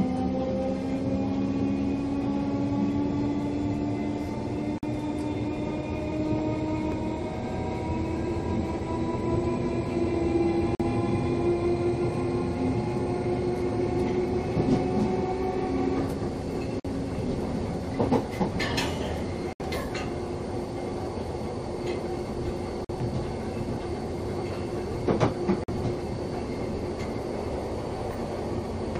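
Gap between chunks at 4.78 s, then 10.75, 16.80 and 22.85 s: each is a 48 ms hard-edged hole repeating every 6.0 s, where silence sits between consecutive chunks of audio. Dropped buffer (overrun) at 6.12 and 6.92 s: jumps where the sound skips forward, with roughly 40 ms skipped, likely because samples were overwritten before being read. Corrupt frame muted from 19.53 to 19.61 s and from 25.64 to 25.70 s: abrupt silences where undecodable frames were replaced, pointing to four and two lost frames respectively, with timing preserved.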